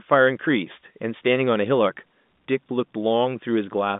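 No technical faults are audible.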